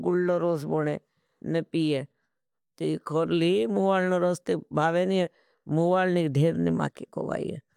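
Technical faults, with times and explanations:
No technical faults are present in this speech recording; the signal stays continuous and stable all the way through.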